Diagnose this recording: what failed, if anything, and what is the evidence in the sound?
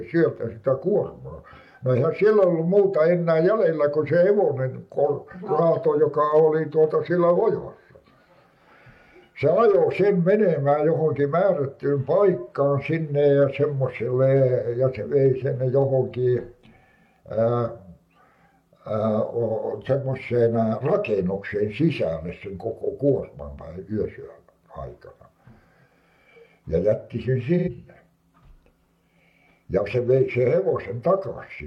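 The failure is at the codec stage: AAC frame loss with concealment. At 27.58 s the sound turns smeared and noisy for a brief patch, ending at 27.69 s. About 85 ms of audio is missing, which fits two lost AAC frames. The decoder had no data for that stretch. It rebuilt it from the last good spectrum, reusing the energy but not the true phase. The patch is too short to fade to silence.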